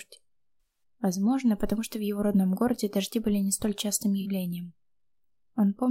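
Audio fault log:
0.61–0.83 s and 4.21–4.26 s, AAC frame loss with concealment: about 150 ms and 43 ms are rebuilt from the last good spectrum, giving smeared, noisy patches rather than clean silent dropouts.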